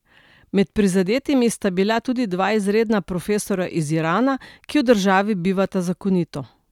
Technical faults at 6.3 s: none

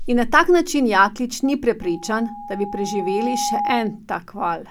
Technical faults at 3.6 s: loudspeaker feedback squeal

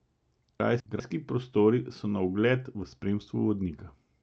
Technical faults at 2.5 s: none

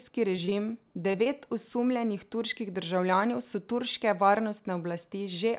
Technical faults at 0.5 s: short concealed packet loss

